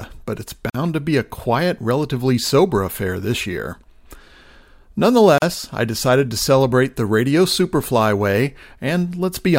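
At 0.70 s, just after "but it's", the speech drops out for about 47 ms before resuming on "to be a quiet". At 5.38 s, a second hole of about 39 ms opens just before "I decided to celebrate". Both are gaps at a join of encoded pieces. The segments were encoded separately and butted together untrimmed, so encoder start-up delay and last-frame padding remain as silence. The waveform shows flat bands with smeared edges, and the spectrogram shows full-height blank stripes before the speech picks up where it left off.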